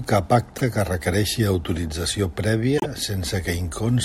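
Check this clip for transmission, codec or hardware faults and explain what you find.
Repeated frames occur twice in the speech, at 0.57–0.61 s and 2.77–2.86 s. Each time, a single 24 ms block of compressed audio was delivered twice, so the decoder plays it again. That produces a brief stutter and adds 24 ms to the audio.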